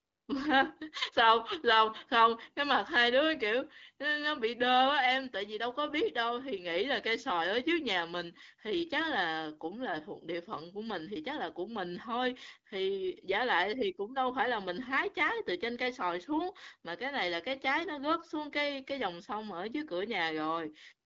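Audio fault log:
Nothing stood out on listening to this speech recording.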